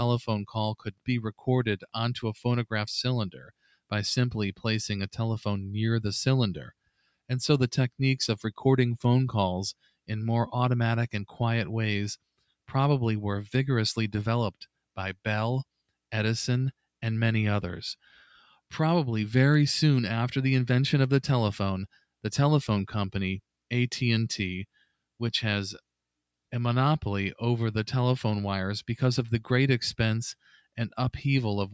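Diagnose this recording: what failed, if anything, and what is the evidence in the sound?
Call-processing stage: a noise suppressor meant for speech was left on during non-speech sound. The level breathes by around 5 dB as held material and tails are treated as noise. The waveform envelope pumps, and on a spectrogram sustained partials thin and flicker below the 8 kHz band limit.

Sound cut by the noise suppressor occurs at 0.78–1.08, 3.31–3.91, 6.82–7.30, 9.78–10.09, 12.21–12.70, 18.44–18.72, 24.74–24.96 and 30.40–30.77 s. Steady sound drops by about 20 dB, but only about 10 dB at 18.44 s. These appear as sudden dark gaps on the spectrogram and collapsed waveform envelopes.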